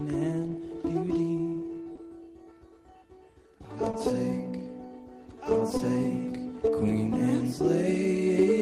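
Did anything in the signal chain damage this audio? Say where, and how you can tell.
Yes. Short concealed packet loss occurs at 1.95–1.99 s, 3.91–3.95 s and 5.77–5.81 s. Each time, about 20 ms of the music failed to arrive over the network. The decoder bridged the gap by extending the preceding sound, then blended back, leaving a brief smear.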